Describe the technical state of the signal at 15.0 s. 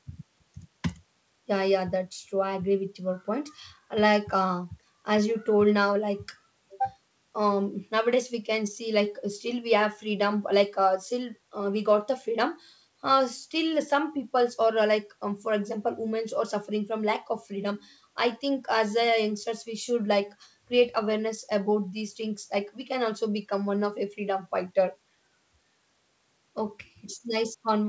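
At 15.0 s the speech is intact, with no dropout, glitch or distortion, only the normal sound of a wideband call path whose content stops at about 8 kHz.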